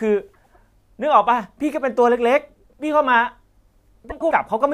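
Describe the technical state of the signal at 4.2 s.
Frames out of order from 4.10 to 4.32 s: two adjacent blocks of about 0.1 s, likely four frames each, play swapped. The result is a garbled flutter, visible as broken formant tracks, with no time lost.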